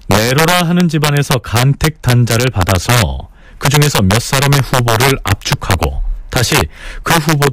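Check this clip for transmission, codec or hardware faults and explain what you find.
Integer overflow runs throughout this speech clip. The signal is driven about 3 dB past full scale, and around one percent of samples exceed the integer limit. They wrap to the opposite sign instead of being held, so each loud peak produces a violent crack far harsher than clipping. On a waveform these appear as full-range vertical jumps; on a spectrogram, as bright broadband vertical lines.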